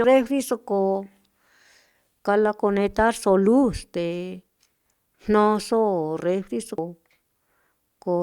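At 0.04 s, just before "refriso ko", and again at 6.78 s, right after "jnoso refriso", the speech is hit by damaged data in a compressed stream. Corrupted bytes make the decoder misread a frame and lose sync until it finds the next valid header, producing a brief chirp, squawk, click or short hole. On a spectrogram each shows as a thin vertical disturbance; the waveform shows a sudden, short discontinuity breaking the surrounding envelope.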